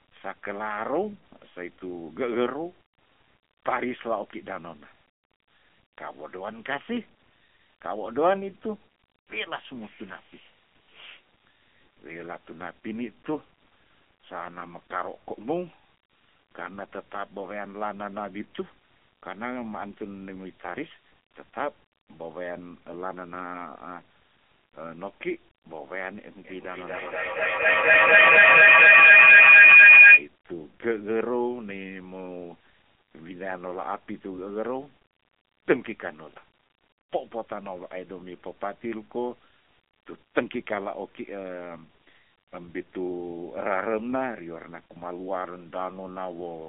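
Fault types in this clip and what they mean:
AMR narrowband mobile codec: heard throughout. The speech passes through a 2G/3G-style mobile coder that rebuilds it from a vocal-tract model. Nothing survives above about 3.7 kHz, and the line band of 200 Hz to 3.5 kHz sounds thin. The low bitrate, which fits the 7.95 kbps mode, leaves a plainly buzzy, synthetic edge.
feedback howl: from 26.45 to 30.3 s. Two devices on the same call share a room, so sound keeps circling from loudspeaker to microphone and gains level on each trip. It narrows to a tone near 3 kHz that pulses about every 200 ms and peaks about 18 dB above the speech.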